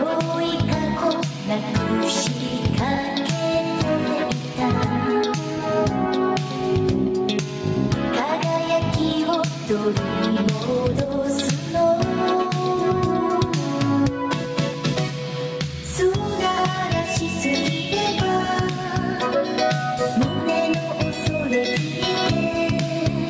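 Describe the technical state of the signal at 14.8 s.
At 14.8 s the sound is inside a run of CD scratch ticks, which lasts from 14.45 to 15.02 s. Five short clicks occur there, the longest only about 1.5 ms, wherever unrecoverable data was interpolated or muted. They appear as thin vertical lines on a spectrogram and as tiny notches in the waveform. Gain pumping also runs through this moment. The gain swings by about 10 dB, likely from gain set too high and pulled back by a fast limiter. On the waveform this shows as a squashed envelope.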